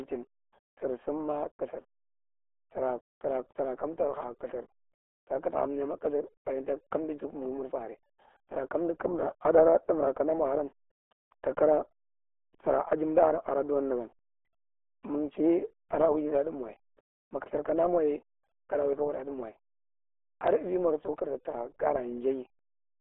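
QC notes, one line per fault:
Throughout, RealAudio 14.4 codec: muffled, gargly speech with nothing above 3.8 kHz, squeezed into 300 Hz to 3.4 kHz, which fits heavy 8 kbit/s dial-up coding.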